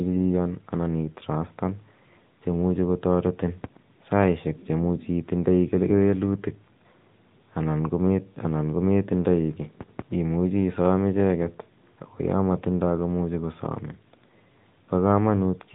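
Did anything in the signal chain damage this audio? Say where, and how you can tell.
Yes: the codec stage applied AMR narrowband mobile coding across the whole speech clip. Nothing passes above 4 kHz, and the buzzy, synthetic timbre fits a mid-rate mode near 10.2 kbps. A spectrogram shows a hard ceiling at 4 kHz, with smeared harmonics in 20 ms blocks.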